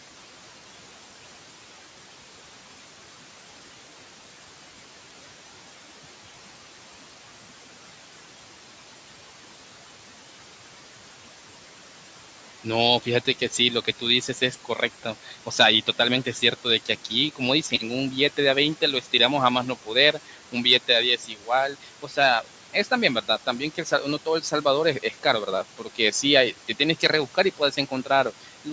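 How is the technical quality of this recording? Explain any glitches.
The recording has two related glitches, both from the noise suppressor in a call chain. The room noise sits about 18 dB below the speech, and the bandwidth stops at 8 kHz, as the call's microphone processing sets it.

Noise suppressor artifacts run through the whole clip. The suppressor turns down each frequency band it judges to be steady noise, frame by frame, cutting the background by about 12 dB. As the gain changes, the leftover noise dips in the gaps and swells under the speech. On a spectrogram the noise floor looks patchy and mottled rather than even, and it darkens between phrases.

Speech cut by the noise suppressor shows up in four stretches: 12.64 to 17.8 s, 18.37 to 19.13 s, 19.86 to 26.13 s, and 26.68 to 28.67 s. The suppressor mistook quiet parts of the speech for noise and pulled them down by about 11 to 12 dB. 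In total that is roughly half a second, a tenth of a second, about a second and a fifth of a second of sound. Soft consonants and word endings sound swallowed. In the waveform the tails of syllables collapse abruptly, and on a spectrogram the faint high-frequency energy of those consonants is missing.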